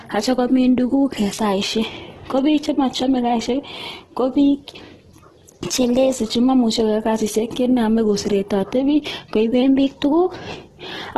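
Throughout, the speech sounds grainy and rough with nothing above 12.1 kHz, likely from heavy Opus compression at 12 kbps in CELT mode; bands are noise-filled rather than swirling like MP3. From 5.63 to 6.16 s, and again from 9.63 s to the end, a drift correction step likely speeds playback by 6.2% and raises pitch about a semitone. Because tempo shifts along with pitch, it differs from a pitch-only effect.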